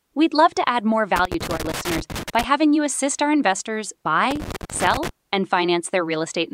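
Loose connector crackle appears from 1.16 to 2.44 s in this speech, right after "love to add more", and again from 4.31 to 5.09 s, following "you assist our investors". A worn or dirty contact somewhere in the signal path is intermittently losing and regaining contact, so the audio is chopped into fragments. Any DC on the line adds pops at each break. Both stretches sound like ragged, irregular scratching laid over the speech.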